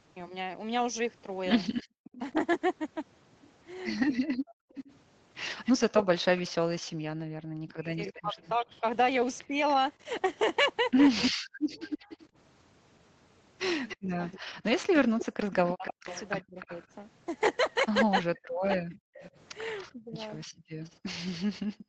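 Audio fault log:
1.77–21.84 s, echo leak: The far end is likely playing the call on a loudspeaker, and its echo canceller is not fully removing what its microphone picks up. That residue comes back as a delayed copy of the speech, trailing the original by about 292 ms and sitting roughly 15 dB below it. It is heard as a faint repeat behind the talker for most of the clip, thinned further by the 8 kHz ceiling of the Opus path.
1.83–2.04 s, 11.32–11.40 s, 20.46–21.88 s, background gated by the echo canceller: Each time the loudspeaker signal is active, the echo canceller clamps the microphone down hard, by as much as about 40 dB. The room tone drops out abruptly and returns when the canceller releases. The first two gaps are brief, roughly a fifth of a second and under a tenth. The last holds the background almost silent until the clip ends.
2.32–20.17 s, speech suppressed in double talk: When both sides talk at once, the echo canceller cannot separate the local talker from the loudspeaker echo, so it likely turns everything down together. 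The talker's speech dips, loses its upper frequencies or breaks into fragments. The deepest cuts reach around 40 dB, and altogether about four seconds across this span are affected.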